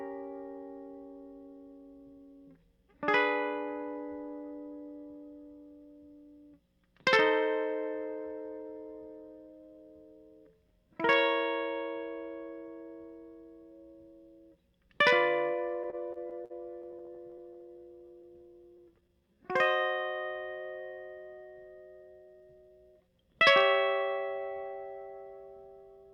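From 15.83 to 19.11 s the music stutters again and again. These are repeated stalls. Packets arrived late, so the jitter buffer kept running dry. Each of 29 short gaps, none longer than 50 ms, was bridged by stretching the last sound. Nothing is lost, but 426 ms is filled in, about 13% of that span, and the passage drags.

Right after, from 19.13 to 19.53 s, comes a jitter buffer slow-down. The receiver rebuilt its reserve by repeating single pitch periods, adding 63 ms. Playback runs at 87% speed with the pitch unchanged, so the sound is briefly drawn out.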